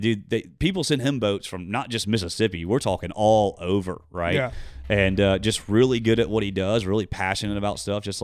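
Nothing here goes wrong technically; the speech runs along with no faults to point to at any moment.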